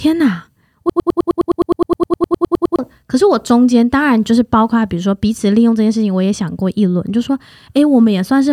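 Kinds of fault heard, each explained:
Broken-record loop: from 0.90 to 2.79 s the speech sticks on one 104 ms fragment, replayed exactly 18 times back to back, and what should have played there is lost; likely the player, encoder or stream stalled and kept resending its last chunk.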